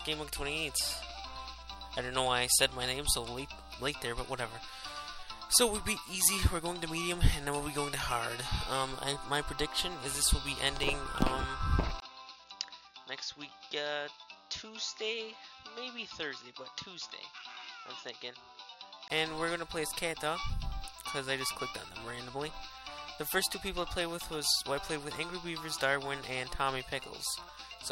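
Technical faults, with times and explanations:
12.00–19.10 s, input switched to a poorer device: a likely input change leaves a 20 ms gap, then sound cut above 7 kHz, about 10 dB quieter, with new noise.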